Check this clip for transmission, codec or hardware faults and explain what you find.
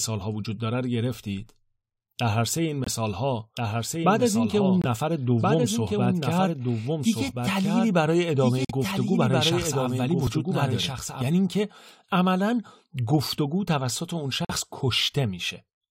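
The speech in this clip has three kinds of fault: muted corrupt frames, a doubled audio track and a dropped buffer.

Corrupt frame muted: short, abrupt holes of silence cut into the speech at 2.84–2.88 s, 4.82–4.86 s, 8.65–8.71 s and 14.45–14.51 s. Damaged compressed frames were rejected by the decoder and replaced with silence. The first gap fits one frame, the others two, and timing is preserved.

Doubled audio track: from 3.57 s to 11.22 s a full-band copy of the speech trails the original by around one and a half seconds, about 5 dB quieter. It has no reverberant decay and starts and stops abruptly. It is likely a second capture path or an edit holding two offset copies.

Dropped buffer (overrun): at 10.27 s there is a small forward jump in the sound, with no silence. It likely comes from an input buffer being overwritten before it was read, so a few milliseconds of audio vanished and the two sides were spliced together.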